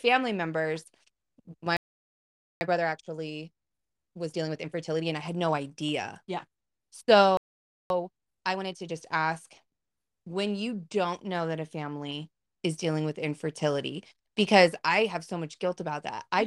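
At 1.77 s the speech cuts out mid-flow and stays silent for about 0.84 s, a playback stall that likely comes from the player running short of data or its thread being held up. On a waveform this is a flat, empty gap; on a spectrogram, a clean vertical band with no energy at any frequency. When the sound returns at 2.61 s it is played through a time-compressed catch-up lasting until 5.61 s, running at 1.25 times normal speed while keeping its pitch. Small slices are dropped and cross-faded, so the speech sounds hurried. On a spectrogram the harmonics stay at their usual heights while syllables sit closer together, with smearing at the joins.

The same pattern repeats with a second stall from 7.37 s to 7.90 s, a silent gap of about 0.53 s. A sharper catch-up follows from 7.90 s to 8.94 s at 1.5 times speed, which packs the syllables together even more tightly.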